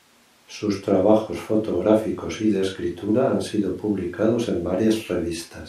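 No technical faults are audible anywhere in this speech.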